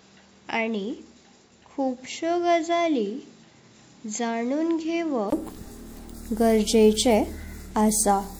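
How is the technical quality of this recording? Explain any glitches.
The recording has one glitch. From 0 to 5.32 s the speech is band-limited above 7.6 kHz, duller, quieter, and noisier, then clears after a 20 ms gap, likely an input switched to a poorer device.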